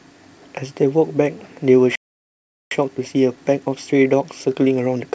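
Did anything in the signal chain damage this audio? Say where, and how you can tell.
Yes. The playback stage shows a playback stall. The speech stops dead at 1.95 s and stays silent until 2.71 s, a gap of about 0.76 s. The player likely ran out of buffered data or its thread was blocked, so output halted until it recovered.

Time-compressed catch-up follows from 2.71 s to the end of the clip. The speech runs about 1.1 times faster at normal pitch. The player is trimming its backlog by cutting out short pieces and cross-fading the joins.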